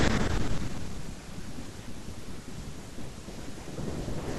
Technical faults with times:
none

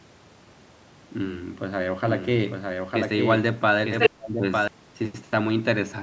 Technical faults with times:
2.02-4.68 doubled audio track
3.99-4.09 other side's voice leaking through
4.08-4.42 speech suppressed in double talk

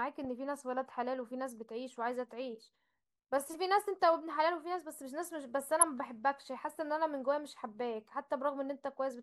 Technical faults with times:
0.00-9.23 MP2 compression
5.79-5.91 DAB burbling

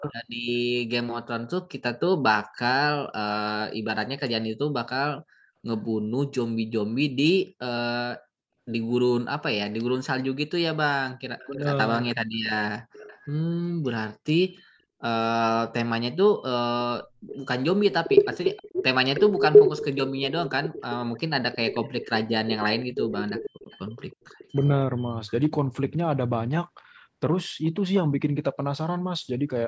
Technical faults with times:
0.00-0.15 speech suppressed in double talk
11.38-13.27 echo leak
17.27-17.37 echo leak
17.90-25.32 echo leak

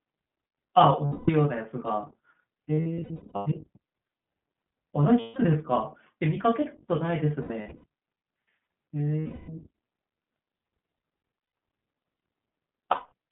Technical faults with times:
0.00-13.32 iLBC codec
1.06-1.30 lost iLBC frames
2.74-3.48 lost iLBC frames
5.20-5.38 lost iLBC frames
7.42-7.86 lost iLBC frames
9.20-9.49 lost iLBC frames
11.39-11.55 lost iLBC frames
12.91-13.12 lost iLBC frames

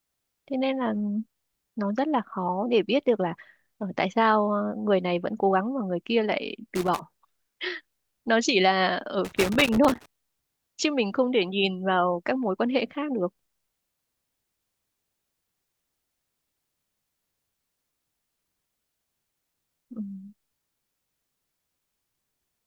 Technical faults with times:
6.75-6.99 loose connector crackle
9.25-10.06 loose connector crackle

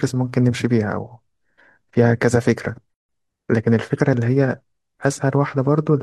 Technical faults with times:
2.94-3.09 gap at a join of encoded pieces

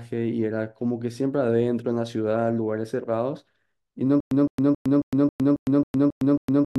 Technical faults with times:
4.20-6.78 stutter with silent gaps

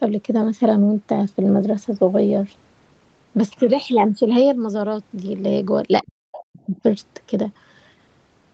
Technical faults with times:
6.06-6.84 speech suppressed in double talk

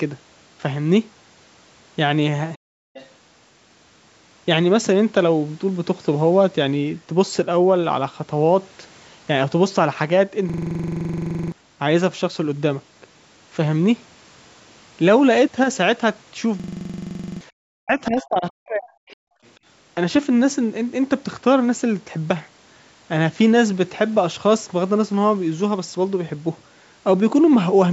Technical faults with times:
2.58-2.94 background gated by the echo canceller
2.94-3.09 other side's voice leaking through
10.50-11.52 system hang loop
16.60-17.41 system hang loop
17.66-19.04 speech suppressed in double talk
19.09-19.15 other side's voice leaking through
19.32-19.42 background gated by the echo canceller

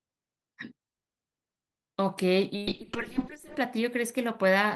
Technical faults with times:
2.56-3.65 call bitrate drop

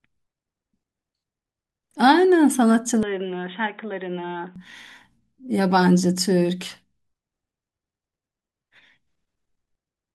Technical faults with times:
3.03-4.56 input switched to a poorer device

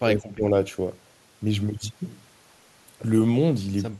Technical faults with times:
0.02-0.43 speech suppressed in double talk

